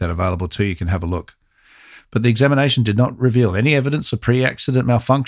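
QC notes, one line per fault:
No faults heard in the speech. Nothing here needs a QC entry.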